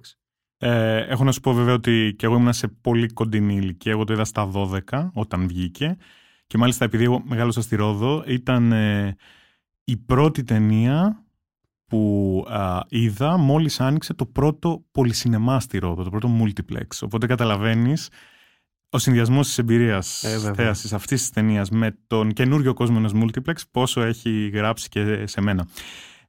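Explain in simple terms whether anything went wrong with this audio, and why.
Something goes wrong near the end. From 23.82 s to the end of the clip, a buzz appears under the speech. This is a block size mismatch (truncated). One part of the system hands the next part chunks of sound that are too long. The tail of each chunk gets cut off. Those regular cuts make a buzz at about 43 times per second, which fits chunks of 1024 samples. The speed of the speech does not change.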